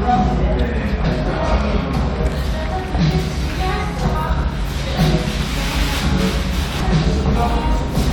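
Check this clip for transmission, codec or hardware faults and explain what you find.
Three short faults are present, all of one kind. Damaged data in a compressed stream causes brief blips at 1.03, 4.15 and 6.79 s. Corrupted bytes make the decoder misread frames and lose sync until it finds the next frame header. Each disturbance lasts under 20 ms.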